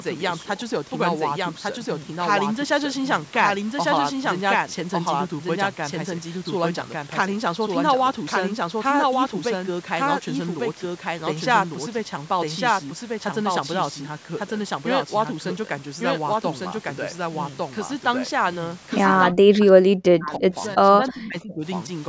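Throughout the speech, a doubled audio track is audible: a second full-band copy trails about a second behind at roughly equal loudness, most likely because a slower capture path recorded it again. Unlike a room echo, it has no decay or reverberant colour.

From 19.31 to 20.56 s and again from 20.76 to 21.65 s, the talker's speech is suppressed in double talk, dropping by as much as about 40 dB and then about 30 dB. This is likely an echo canceller that could not separate the talker from the far side's loudspeaker echo.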